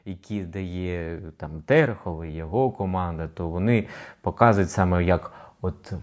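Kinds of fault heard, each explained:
Automatic gain rising: the gain control lifts a too-quiet input by about 11 dB, speech and background swelling together slowly over five seconds, not as one abrupt step.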